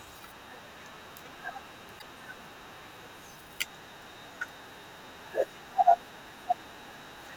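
Damaged data in a compressed stream appears at 1.96 to 2.03 s: corrupted bytes in the encoded speech make the decoder misread those frames and lose sync until it finds the next valid frame header, leaving a brief 70 ms glitch.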